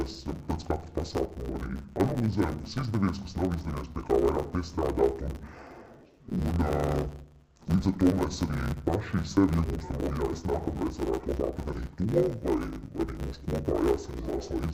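Throughout, the audio shows interleaved audio read as planar: each 10 ms block's alternating samples are split into halves and played at half speed, giving a dull, robotic sound that buzzes at 100 Hz without a clear octave drop. A spectrogram shows evenly spaced 100 Hz striations, and the waveform jumps every 10 ms.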